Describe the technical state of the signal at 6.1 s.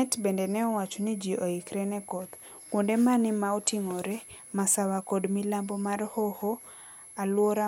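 At 6.1 s a switching supply whistle sits under the speech, as it does through the whole clip. A nearby switching power supply is likely running in an audible burst mode. Its cycling leaks into the signal as a thin, high whistle, wandering between about 10.6 kHz and 11.5 kHz as the load shifts. The whistle sits roughly 20 dB below the speech.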